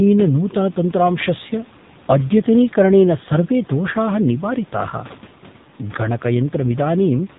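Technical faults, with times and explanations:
throughout, AMR narrowband mobile codec: nothing above 4 kHz passes. The speech sounds plainly buzzy and synthetic, which fits a low 7.4 kbps mode.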